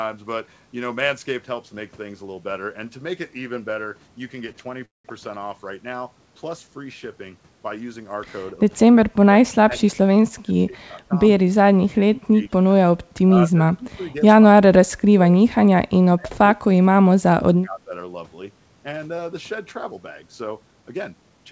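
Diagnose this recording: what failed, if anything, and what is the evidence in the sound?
At 4.52–4.57 s a speech sound is held about 25 ms too long with a slight buzz or dip. This is a short stall from a late packet: the network delivered it late and the jitter buffer ran dry.

From 4.85 to 5.07 s a brief buzz or hiss fades into about 170 ms of silence, then speech resumes without loss. This is likely a call audio freeze, with delayed packets emptying the buffer.

The voice dips by about 25–30 dB at 8.87–11.15 s, 11.7–13.0 s and 13.32–17.91 s. The likely cause is speech suppressed in double talk by the echo canceller in the call processing.

Speech sounds hurried at unchanged pitch at 15.66–16.44 s (7% faster) and 20.82–21.46 s (10% faster). This is jitter buffer speed-up, which trims pitch periods to shed excess delay.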